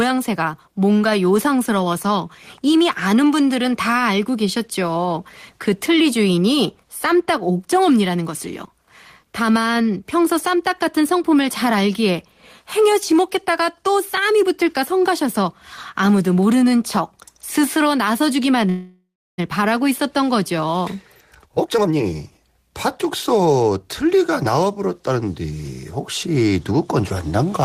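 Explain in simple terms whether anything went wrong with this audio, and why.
Two things go wrong here. At 18.69 s the sound stalls until about 19.4 s: a call audio freeze. The last bit gets stretched into a fading buzz, then about 0.32 s of silence, and the speech picks up exactly where it left off. That's likely packets stuck in transit.

Right after, from 21.39 to 24.44 s, there's a jitter buffer speed-up. The receiver had a backlog, so it snipped out tiny slivers, around seven-tenths of a second in all, making the speech run about 21% faster without the pitch rising.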